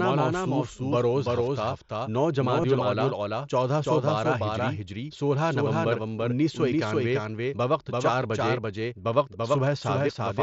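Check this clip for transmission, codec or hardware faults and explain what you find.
Two faults turn up in this speech clip: a second copy of the whole track running behind the first, and one brief concealed dropout on the Bluetooth headset link.

The doubled audio track runs throughout. A full-band copy trails the original by roughly a third of a second at about the same level, with no decay or room colour. The likely cause is a slower second capture path or an edit leaving two copies out of step. You hear it as a flat, slapback-style repeat of every syllable.

The concealed Bluetooth headset packet loss comes at 2.62 s, just before "الاولیٰ چودہ سو بارہ". About 15 ms of audio went missing between headset and phone, which fits a couple of lost frames. The receiver filled the gap by repeating the best-matching bit of recent waveform. Because the gap is so short, it's nearly hidden. The mSBC wideband link around it gives the usual 8 kHz ceiling with a light grain on louder sounds.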